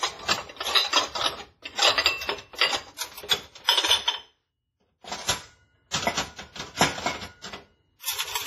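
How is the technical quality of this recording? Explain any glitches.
The recording has clear lossy-codec damage throughout, plus one short pre-echo artefact.

Throughout the clip the audio sounds ringing and washy, with a hiss that rises and falls with the sound and nothing above 15.3 kHz. The likely cause is WMA compression, heavy enough to fit a low bitrate around 24 kbps. Its transform blocks spread quantisation noise over tens of milliseconds and drop weak components entirely. Steady background noise would stay constant, but this hiss breathes with the signal.

From 5.91 to 5.94 s a sharp attack is preceded by about 28 ms of hiss, and the attack itself sounds softened and smeared. This is pre-echo. The codec spreads noise sized for the loud attack evenly across its block, so the quiet moment just before the hit is filled too. Reverb or an echo would trail after the sound, whereas this smear comes ahead of the attack.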